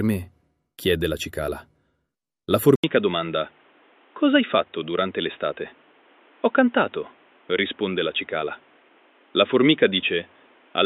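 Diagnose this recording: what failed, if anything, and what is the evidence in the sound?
Input switched to a poorer device at 2.76 s, likely at the driver stage: after an 80 ms silence, the sound stays dull to the end with nothing above 3.8 kHz, a new noise floor around 35 dB down, and level essentially unchanged.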